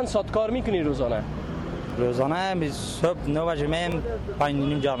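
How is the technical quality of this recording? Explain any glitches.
Two glitches from overlapping chunks, at 1.90 to 1.92 s and 3.92 to 3.94 s. The audio was handled in blocks of 2 s, and each new block began 20 ms before the previous one had finished. At each join that 20 ms slice plays twice, producing a brief stutter or click. Because the joins fall at a fixed 2 s spacing, the disturbance recurs on a steady rhythm.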